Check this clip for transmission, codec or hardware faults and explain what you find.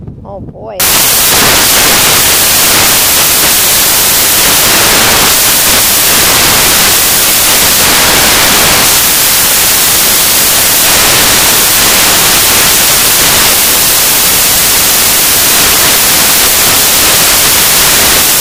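One fault runs through nearly the whole clip. Samples built from the wrong bytes begins at 0.80 s and continues to the end. Each sample's bytes are being assembled incorrectly, whether through a one-byte offset, a swapped byte order or a wrong alignment assumption. The rapidly fluctuating low-order bits therefore become the dominant part of every value. The result replaces the intended audio with broadband noise from that point onward.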